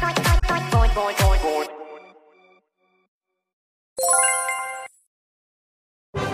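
A short glitch cuts through the audio from 0.39 to 0.43 s, lasting under 50 ms. This is damaged data in a compressed stream: corrupted bytes made the decoder misread those frames and lose sync, then resume once it found the next valid frame header.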